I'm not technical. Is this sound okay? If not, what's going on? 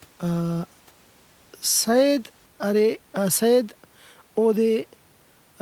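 Yes, this sound is okay; the faint background noise of the room sits well under the speaking and is just part of where it was recorded.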